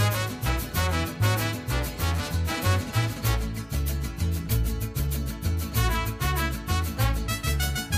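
No technical faults are audible anywhere in the audio.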